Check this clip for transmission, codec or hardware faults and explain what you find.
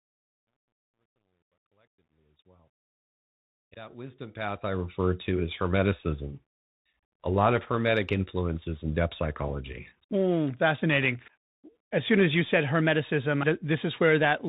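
One fault runs through the whole clip: the speech has passed through a Bluetooth CVSD headset codec, and the damage is plainly audible. The codec sends one bit per sample, up or down, with an adaptive step, which fits a 64 kbit/s stream. It passes nothing above 4 kHz, so the speech sounds boxed-in and telephone-like. Loud bright sounds outrun the step and distort, s sounds come out scratchy, and a grainy hiss sits underneath. A spectrogram would show a hard ceiling at 4 kHz with broadband grain below it. The waveform would look jagged on fast transients. The smooth fade-in from the start to about 5.14 s can be heard through this band-limited, hissy sound.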